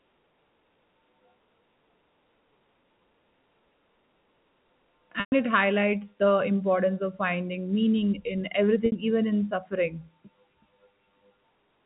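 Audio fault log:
5.20–5.32 s and 8.86–8.92 s, packet loss with pitch repetition: two dropouts of 120 ms and 60 ms, which fits six and three 20 ms packets. The receiver fills each gap by looping the last pitch period. The first gap, just before "it highlights", holds as a flat buzz, fades to silence, and cross-fades back in. The second, between "of finding meaning in" and "even in suffering", is shorter, so it is mostly a held, buzzy tone that fades out by its end. On a spectrogram, the harmonics go frozen and flat. On the waveform, one cycle repeats identically while its amplitude tapers.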